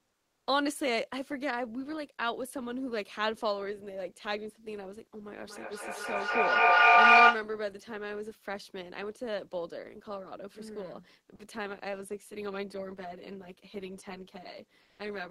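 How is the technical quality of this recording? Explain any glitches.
Not great: there are four distinct kinds of trouble, spread across the whole recording.

Right at the start, from 0.00 to 0.47 s, the room tone sounds flat and featureless, about 52 dB under the loud speech and about 2 dB quieter than the background that follows. That's comfort noise in place of the background, likely from Opus DTX: the sender stopped transmitting during the pause, and the receiver filled the gap with synthetic, roughly matched hiss. The same thing happens again from 14.81 to 14.99 s, this time about 42 dB under the speech with no level jump, so only the loss of texture gives it away.

From 5.40 to 7.53 s there's feedback echo between two devices. Two endpoints in the same room are on the call, so each microphone picks up the other's speaker. Neither echo canceller can remove sound it didn't play itself. 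The speech comes back roughly every fifth of a second, getting thinner and more ringy, and the repeats pile up until they reach about 15 dB over the original speech instead of fading out.

At 11.35 to 11.39 s, 40 ms of speech simply vanishes into steady noise. That's sound dropped by the voice detector. The detector likely took part of the speech for background, and the sender stopped sending for that slice. It's brief, but you hear a tiny hole.

From 12.14 s to the end there's channel delay causing comb filtering. One channel runs around 10 ms late, and when the two are summed to mono, the shared content cancels at evenly spaced frequencies. The first notch sits around 50 Hz, with more notches roughly every 100 Hz above it, so the speech turns hollow and phasey.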